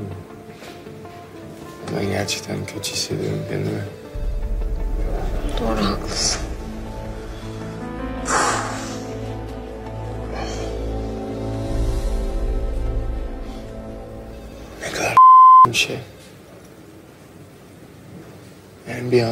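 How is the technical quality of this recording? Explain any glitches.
The recording has one glitch, a sustained drop in quality. From 6.08 to 14.08 s the adaptive stream switches to a lower bitrate when the connection slows. The treble thins, with nothing above 14.9 kHz, which fits a move to a low-rate HE-AAC stream. Unlike a dropout, the shift is sudden and leaves no gap or silence.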